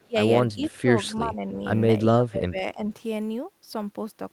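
Speech in which the talker's level repeatedly sinks during stretches of overlap, from 0.00 to 0.18 s, 0.53 to 0.65 s, 1.23 to 1.63 s and 2.02 to 2.87 s, by as much as roughly 25 dB in the first and deepest dip. This is speech suppressed in double talk, likely an echo canceller turning the near talker down along with the far-end echo. Nothing is added; the voice itself thins and drops. Echo leak differs, adding a faint delayed copy rather than removing sound. It appears briefly at 0.69 to 0.77 s, trailing the speech by 321 ms at roughly 30 dB below it, likely residual loudspeaker pickup sent back.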